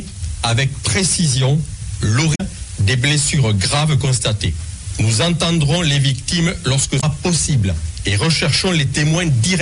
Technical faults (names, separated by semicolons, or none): damaged data in a compressed stream